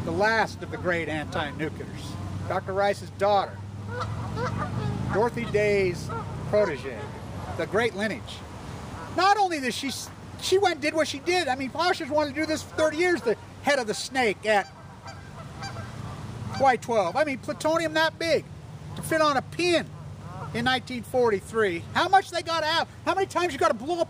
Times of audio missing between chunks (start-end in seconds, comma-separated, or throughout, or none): none